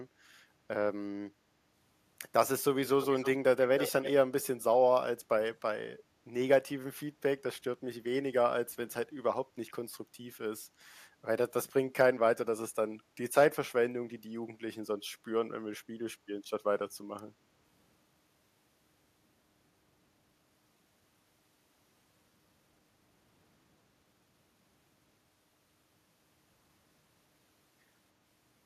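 A far-end echo canceller likely let loudspeaker pickup through, so this speech clip carries an echo leak: a faint copy delayed about 312 ms at 3.01–3.3 s, louder at 3.78–4.11 s.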